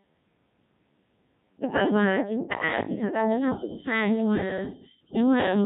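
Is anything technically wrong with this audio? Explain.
Yes, the whole clip has been through a Codec 2 vocoder, and it's heavily damaged. Codec 2 doesn't keep the waveform. It sends only pitch, voicing, energy and a rough spectral envelope, and the decoder rebuilds the speech from sine waves. Here that gives a robotic, buzzy voice with a synthetic edge from start to finish. How coarse it sounds fits a very low rate, around 1.3 kbit/s.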